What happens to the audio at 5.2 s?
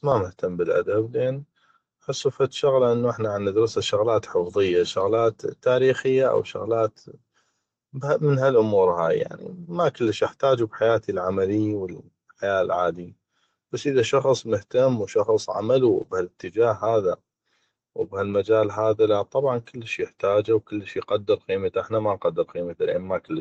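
At 5.15 s, between "احتا عندرسه شغلات حفظيه" and "تاريخيه أو", there is a lost packet rebuilt from error correction. The span fits a single lost 20 ms packet whose content the decoder replaced with the low-bitrate copy carried in the next one. There is no dropout, just a brief rough, noisier patch. On a waveform the envelope stays continuous, while a spectrogram shows a 20 ms slice with smeared harmonics and a raised noise floor below the 8 kHz call bandwidth.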